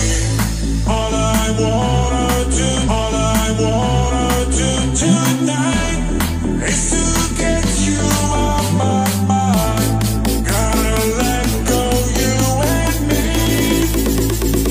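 Stream segment repeated, from 2.84 to 4.84 s: the player fetched or queued the same chunk of the stream twice, so about 2.0 s of audio plays a second time, with a small blip at the point where playback jumps back and restarts.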